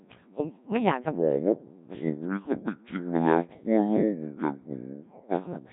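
Codec 2 vocoder damage runs through the whole clip. The speech is rebuilt from pitch, voicing and a coarse spectral envelope rather than the original waveform, so it sounds heavily buzzy and robotic. Nothing is present above 3.8 kHz, and the rate is a very low one, around 1.3 kbit/s.

A section at the wrong speed runs from 1.15 s to the end. It plays at 0.58 times its proper rate, so speed and pitch drop together, about ten semitones lower, and the speech turns deep and dragged. The likely cause is playback against a mismatched clock.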